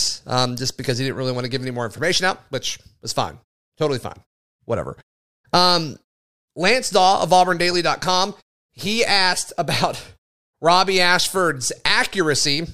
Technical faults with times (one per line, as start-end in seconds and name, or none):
none